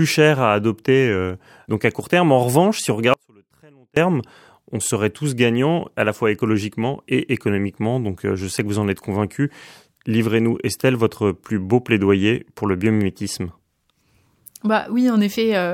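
A speech clip where the wanted signal was likely lost upstream while the path after the break stayed live, causing an audio dropout to a faint residue from 3.14 to 3.97 s, right after "revanche si on". For about 0.83 s the speech cuts abruptly to a faint leak some 35 dB down, then snaps back.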